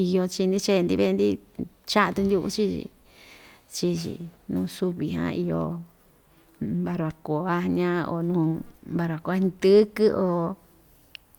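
Nothing in the speech recording stood out as a technical problem on listening.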